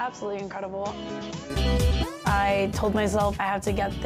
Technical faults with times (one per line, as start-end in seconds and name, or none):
0.00-1.50 input switched to a poorer device